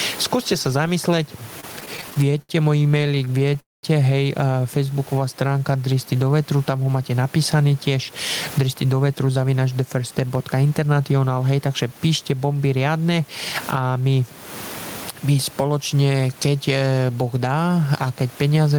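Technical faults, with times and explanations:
throughout: gain pumping. The level swings by about 20 dB, likely from excessive gain feeding a fast limiter. The waveform envelope looks flattened and the noise band breathes.
1.60–3.56 s: repeated stalls (stutter). Repeated buffer underruns cause 25 brief holds, the longest 71 ms, filling about 17% of the span. The audio drags and stutters, and the spectrogram shows repeated smeared, frozen slices.
3.60–3.84 s: call audio freeze. A 232 ms hold fades into 200 ms of silence, then the speech resumes intact. The likely cause is packets held up in transit. This appears as a fading smear, then a blank gap.
4.87–6.32 s: jitter buffer slow-down. The receiver repeated pitch periods to rebuild its reserve, adding 182 ms. Speech runs at 88% speed with unchanged pitch, and the spectrogram shows stretched, drawn-out harmonics.
8.58–11.54 s: jitter buffer speed-up. 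The receiver trimmed pitch periods to shed excess delay, removing about 0.3 s. Speech runs at 110% speed and sounds hurried, and the spectrogram shows compressed syllables at the same pitch.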